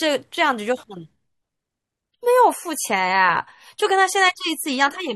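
At 2.11 s the speech suddenly picks up more codec artefacts until the end, with no gap. This is an adaptive stream at a lower bitrate, which fits AAC dropping from 96 to 32 kbit/s. A spectrogram shows an abrupt change in quality there, while the waveform stays unbroken.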